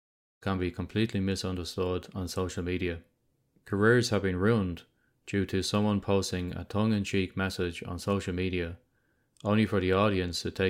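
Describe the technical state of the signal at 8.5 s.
At 8.5 s the speech signal is intact, with no dropout, click, distortion or other fault audible at that point.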